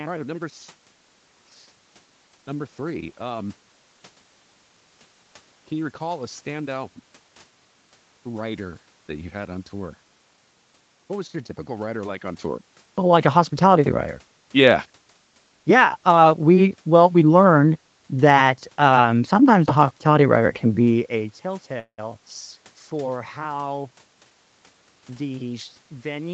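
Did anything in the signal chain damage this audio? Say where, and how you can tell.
Yes. At the network stage, from 21.79 to 22.00 s the sound stalls into a fading fill and then silence: likely a call audio freeze from delayed packets, with nothing lost.

Jitter buffer speed-up at 23.84–25.11 s: repeated pitch-period cuts, about a fifth of a second in total, push playback to 114% speed at unchanged pitch.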